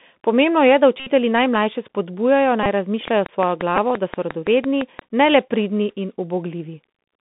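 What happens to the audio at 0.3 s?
At 0.3 s the speech is passing through a Bluetooth CVSD headset codec, and that holds for the whole clip. The band runs only from about 150 Hz to 3.6 kHz. The codec sends one bit per sample, stepping up or down with an adaptive step size, which fits a 64 kbit/s stream. Fast, loud high content outruns the step and distorts. S sounds turn scratchy, and a grainy hiss sits under the speech.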